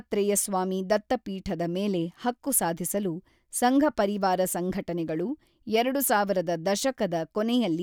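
Nothing in this short speech recording stands out as a technical problem; there's no fault to point to at any moment.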